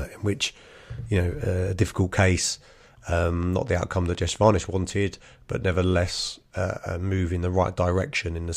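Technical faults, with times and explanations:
3.43–4.65 s, train of clicks: about ten similar sharp ticks, roughly 8.2 per second at an uneven pace, sit over the speech just before "wanted but nevertheless uh" and peak at about the level of the speech itself. A spectrogram shows them as thin vertical broadband lines at irregular intervals, and the waveform as narrow spikes. These are repeated pulses, most likely from electrical interference or a faulty connection or power supply.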